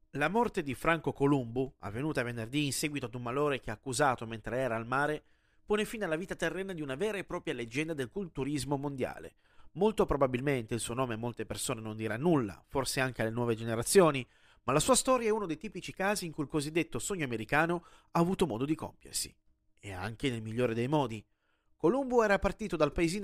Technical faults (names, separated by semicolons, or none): none